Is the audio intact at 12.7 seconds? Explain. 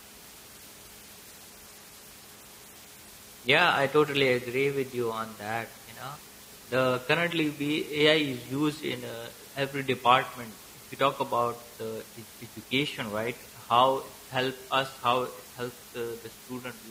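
Yes, at 12.7 s the speech is intact, with only the steady room background sitting about 22 dB below it.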